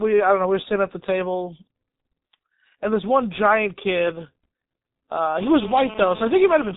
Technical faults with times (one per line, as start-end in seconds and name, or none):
0.00-6.76 G.723.1 codec